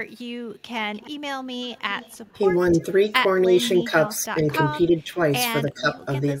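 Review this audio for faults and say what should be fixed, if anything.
An echo canceller at the far end, likely running a loudspeaker, failed to remove all of what its microphone picked up and sent it back. The result is echo leak: a delayed copy of the speech about 301 ms behind the original. It appears very faintly at 0.16 to 0.21 s, then more clearly, roughly 25 dB below the speech, at 0.94 to 1.11 s and 1.65 to 2.4 s. Better echo-path modelling or a stronger residual echo suppressor would prevent it.

The same echo canceller likely could not separate its own talker from loudspeaker echo while both sides spoke at once, so it turned the whole signal down. This is speech suppressed in double talk. The speech dips by roughly 10 to 15 dB in pieces at 3.45 to 3.58 s, 3.84 to 3.93 s, 4.34 to 4.45 s, 4.61 to 5.17 s and 5.64 to 5.98 s, with the longest losses near the end. A more reliable double-talk detector would keep the near talker open.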